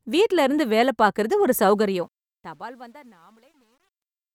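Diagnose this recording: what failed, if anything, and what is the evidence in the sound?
Truncation distortion on a fade from 1.74 s, worst after 2.55 s: a digital fade stage without dither, which fits 10 bits, turns the quieting speech gritty and stepped.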